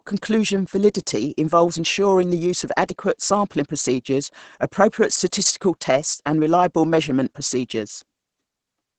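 From start to finish the speech sounds muffled, hoarse and slightly robotic, with nothing audible above about 8.9 kHz. This is Opus voice compression, heavily damaging here: the linear-prediction SILK coder, held to a wideband range, models the voice and codes its excitation very coarsely, which points to a low rate of around 10 kbps.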